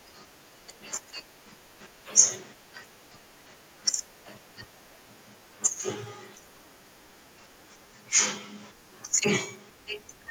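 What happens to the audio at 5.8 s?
A dropped buffer (overrun) occurs at 5.83 s. The speech jumps ahead, losing only a sliver of sound of a millisecond or two. The likely cause is samples overwritten by the hardware before the program collected them, leaving the two sides spliced directly together with no gap.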